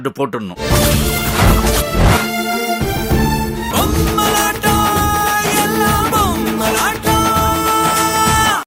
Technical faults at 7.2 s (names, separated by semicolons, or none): none